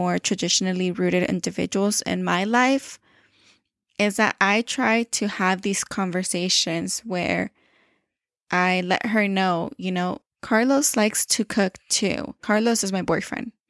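No technical faults are audible.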